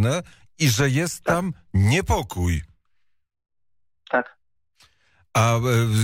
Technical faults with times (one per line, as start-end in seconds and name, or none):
none